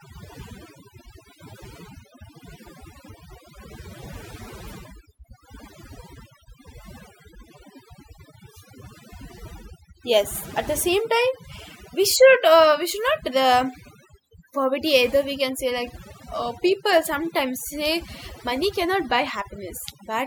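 Across the whole recording the background sits in near silence, broken by twinkling specks. That is overdone noise removal: a noise reduction stage was set too aggressively on a noisy source, so it pulled individual frequency bands far down or out entirely wherever they came close to its noise estimate. The quieter parts of the speech were caught in that cut.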